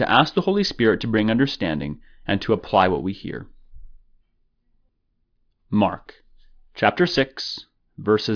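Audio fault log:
No faults are heard in the speech clip. Nothing in it calls for an entry in the log.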